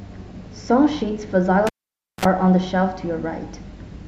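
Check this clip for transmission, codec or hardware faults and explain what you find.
A hardware fault appears in this speech: a cable pulled and plugged in, between 1.67 and 2.25 s. A live connection is broken, leaving the input floating for about 0.53 s, then remade with only the plug tip touching first. A pop marks the pull, followed by near silence; as the plug goes back, a 44 ms burst of 60 Hz mains buzz comes through the ungrounded contact before a second pop and the return of the speech.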